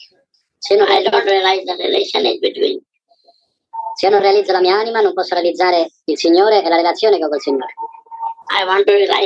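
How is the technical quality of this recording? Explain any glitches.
The recording has one fault that runs through the whole clip: a wrong sample rate.

From start to finish, everything plays about 1.38 times too fast and about 5.55 semitones too high, which fits audio recorded at 16 kHz being played back at 22 kHz with no conversion. Because each sample arrives sooner than intended, timing shrinks and every frequency rises by the same ratio, so the sound comes across as hurried and thin. On a spectrogram, all harmonics and formants sit proportionally higher, and the content reaches up to about 11 kHz instead of 8 kHz. The waveform looks normal but compressed in time.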